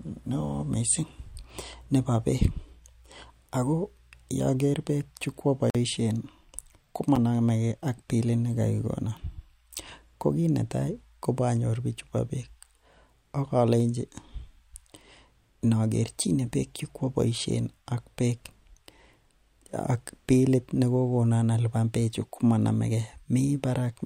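Speech, with two blocks of digital silence: a 46 ms hole at 5.70–5.75 s, fitting a 2048-sample buffer left unfilled, and a tick at 7.16 s. Unlike a fade, both cut abruptly to silence.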